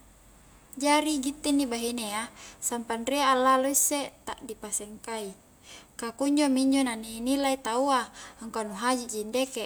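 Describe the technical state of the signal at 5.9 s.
At 5.9 s the speech signal is intact, with no audible fault at that moment.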